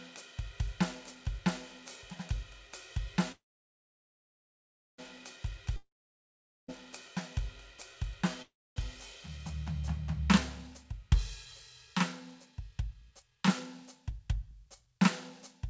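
At 3.32 s the music stalls in a call audio freeze until 5.00 s, likely from delayed packets draining the jitter buffer. The last sound fades to about 1.6 s of silence, then the music resumes exactly where it stopped, with nothing lost.

From 5.76 to 6.70 s a long network dropout likely cut off incoming audio. After the fade and about 0.8 s of silence, the music returns further on, missing roughly 0.9 s.

A second call audio freeze at 8.42 to 8.78 s, likely caused the same way, inserts a 0.34 s gap, about 0.27 s of it silent, with no music lost.

From 10.70 s to the end, a jitter buffer speed-up plays the music about 9% faster at unchanged pitch. Roughly half a second of tiny pieces is removed, which makes the tempo feel hurried and uneven.

Throughout, the G.722 call path leaves nothing above 8 kHz.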